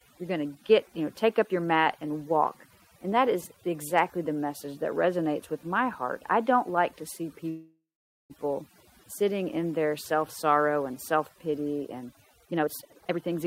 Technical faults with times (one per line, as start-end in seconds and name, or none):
0.00-13.46 overdone noise removal
7.49-8.32 call audio freeze
12.47-13.44 jitter buffer speed-up